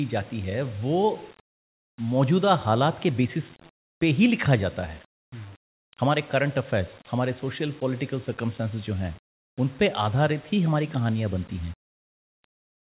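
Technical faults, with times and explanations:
Nothing stood out as a technical fault on listening to this speech recording.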